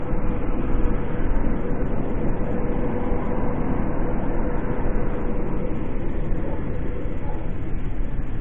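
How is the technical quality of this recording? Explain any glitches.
Two brief glitches stand out, at 1.96 s and 5.56 s. Both are damaged data in a compressed stream: corrupted bytes throw the decoder off, it garbles or drops the frame while hunting for the next valid header, and you hear a quick blip.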